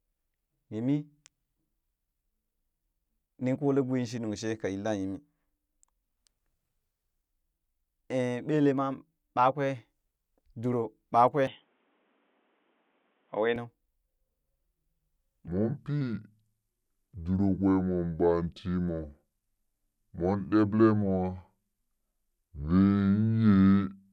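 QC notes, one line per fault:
11.47–13.56 s, input switched to a poorer device: the speech suddenly turns dull and boxy, then clears again at 13.56 s. There is no gap at either switch and the level holds about steady. A faint new noise floor, about 45 dB below the speech, rides underneath. This is likely a change to a narrower-band microphone or a headset call profile. On a spectrogram the energy is cut off at a lower top frequency for that stretch, and the waveform envelope barely changes.
15.48–24.13 s, section at the wrong speed: from 15.48 s to the end the speech plays at 0.668 times its proper speed, so it drags and drops about seven semitones, giving a deep, slowed, heavy sound. Speed and pitch move together, which points to the audio likely being played or resampled against the wrong clock. On a spectrogram the harmonics and formants shift downward and spread out in time, and the waveform's syllable envelopes stretch to roughly one and a half times their length.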